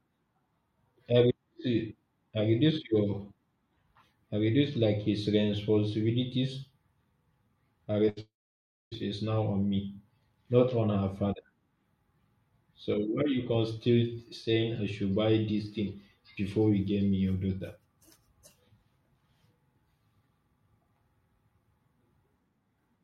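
Short concealed packet loss at 8.05 to 8.09 s in this speech recording leaves a brief smear where about 20 ms of the call arrived too late and the receiver continued the preceding sound to cover it. A burst of packet loss follows at once, from 8.09 to 8.18 s: roughly 80 ms is missing, bridged by a fading continuation of the last sound before the audio resumes further on. From 8.20 to 8.93 s the sound turns briefly into a decaying buzz or hiss and then about 0.6 s of silence before the speech returns with that stretch gone, most likely a long network dropout.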